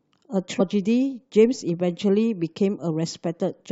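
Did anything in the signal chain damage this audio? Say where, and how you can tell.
Yes, there's damaged data in the compressed stream, so this is a codec-stage problem. At about 0.6 s the speech breaks into a very short glitch. Corrupted bytes made the decoder misread that frame, lose sync and hunt for the next valid header.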